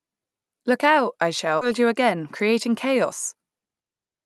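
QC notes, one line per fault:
1.61–1.63 s, skip ahead: the audio jumps straight past a chunk of speech with no gap or fill, and something like 0.7 s is simply gone. Later audio was already queued, so the missing stretch was dropped and the two sides were stitched together almost directly. That's why it sounds like an abrupt splice, with the rhythm lurching forward, rather than a dropout or silence.
1.79–3.90 s, jitter buffer speed-up: right after the jump, the receiver is still holding more audio than it wants, so it keeps trimming tiny pitch-period-sized slices to bring the delay down. Over this stretch it runs at about 106% speed and takes out roughly 0.15 s in total. The pitch stays put, but the speech comes across slightly rushed. The Opus coding underneath just adds its usual coding noise.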